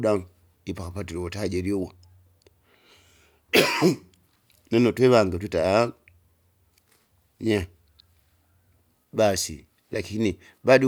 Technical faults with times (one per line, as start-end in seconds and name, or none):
none